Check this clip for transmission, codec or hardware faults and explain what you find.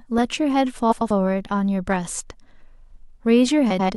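Two faults, both of one kind. Frames out of order at 0.91–1.11 s and 3.70–3.90 s: two adjacent runs of about 93 ms each were decoded swapped, giving a garbled flutter.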